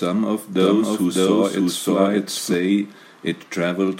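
A doubled audio track runs from 0.6 to 2.54 s: an equally loud, dry copy trails roughly 0.7 s behind, likely from a slower capture path.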